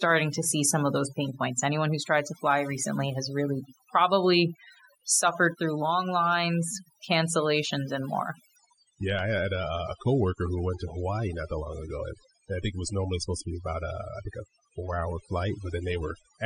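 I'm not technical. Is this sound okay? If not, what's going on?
No. Overdone noise removal runs through the whole speech clip. The background drops away and breaks up into small twinkling specks.

From 8.56 s, just after "lines cancellations and more", the stream switches to a lower bitrate. The voice suddenly loses its crisp top end, with nothing above 9.7 kHz, and sounds duller and grainier until the end.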